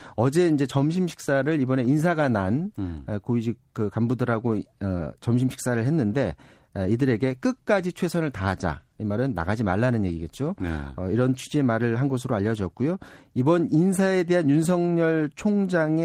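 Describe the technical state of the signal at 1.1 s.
At 1.1 s the speech signal is intact, with no dropout, click, clipping or other technical fault audible at that moment.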